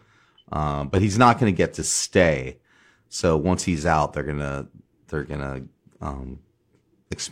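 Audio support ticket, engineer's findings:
No audible faults found on listening; no dropouts, glitches or level anomalies detected, so no component is implicated.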